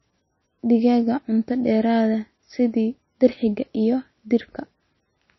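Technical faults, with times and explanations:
Throughout, MP3 compression: the speech has nothing above 5.8 kHz and a plainly audible watery, swirling texture, with s sounds turned metallic and consonant onsets smeared. This is likely an MP3 encoder short of bits, which fits a bitrate near 22 kbps. It cuts the treble at a fixed frequency and drops weak frequency lines that flicker on and off between frames. On a spectrogram, energy stops at a flat ceiling at 5.8 kHz, with speckled, patchy gaps below it.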